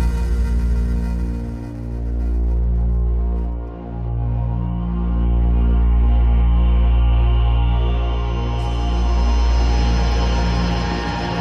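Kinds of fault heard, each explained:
No dropouts, clipping, distortion, noise bursts, pitch or timing errors, or other technical faults can be heard anywhere in the audio.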